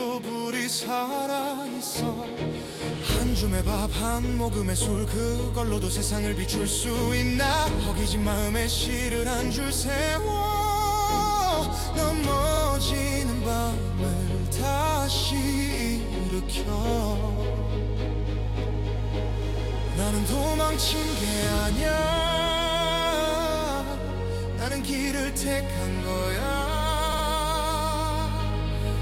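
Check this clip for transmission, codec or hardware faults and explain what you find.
Two stutters from repeated frames are audible. At 12.56 s a 42.7 ms block plays once more, adding 42.7 ms. At 27.12 s a 64 ms block plays twice more, adding 128 ms. The decoder receives the same compressed frames again and replays them, so the sound briefly loops. The block lengths suggest two and three short codec frames. On a spectrogram, identical slices sit side by side with a vertical seam at each join. The waveform shows the same shape copied end to end.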